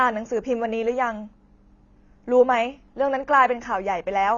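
From the first syllable to the end, the speech sounds dull and smeared, with nothing above 6.9 kHz and a fizzy, warbling edge on sibilants. That's likely AAC compression, AAC-LC squeezed to a low bitrate around 24 kbps, trimming the top and starving bands.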